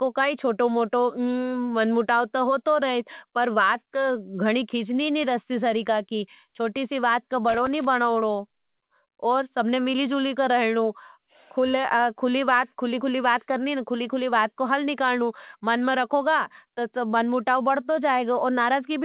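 Just after "चोटी सी बात का", from 7.49 to 7.85 s, a loose connector crackle erupts. A worn contact makes and breaks as it shifts, chopping the speech into an irregular, scratchy burst. The waveform shows jagged spikes and brief dropouts. The spectrogram shows scattered vertical streaks that stop at 4 kHz, the call path's band limit.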